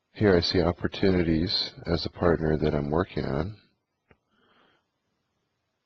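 From start to end the audio carries overlap-add ripple. Frames were rejoined with overlaps that don't sum evenly, so the level dips and swells by about 6 dB around 200 times a second. It sounds like a metallic buzz with extra tones around each note. The waveform shows a regular amplitude ripple, and the spectrogram shows sidebands around 200 Hz apart.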